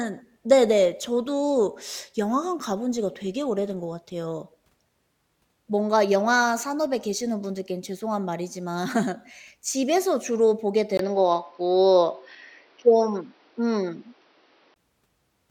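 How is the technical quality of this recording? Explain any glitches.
The recording has one glitch, from 10.97 s to 14.76 s, most likely an input switched to a poorer device. The signal path jumps to a narrower-band input, cutting everything above 5.9 kHz, so the speech turns dull and boxy after a 20 ms silence, with a level shift of about 5 dB and new background noise about 40 dB down.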